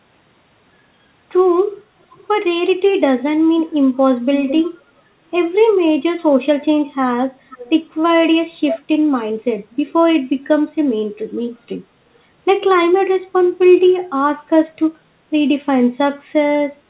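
A delayed copy of the speech comes back at 2.02–2.27 s, 4.34–4.82 s, 7.5–7.7 s and 8.66–8.78 s. It trails by about half a second. It is barely audible at first and nearly as loud as the speech by 8.66 s. This is echo leak, likely from a loudspeaker's echo canceller letting sound through.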